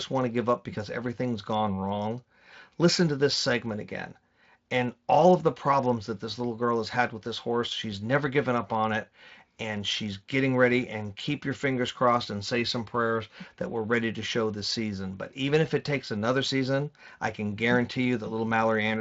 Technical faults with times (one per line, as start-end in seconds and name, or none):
none